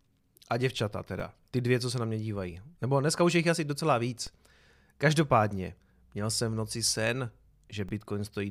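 At 1.20 s, 4.27 s and 7.89 s a DC step hits the speech: the waveform's zero line jumps by about -32 dBFS, then decays back through a 20 Hz high-pass. Each jump sounds as a brief low thump, while the speech carries on unchanged.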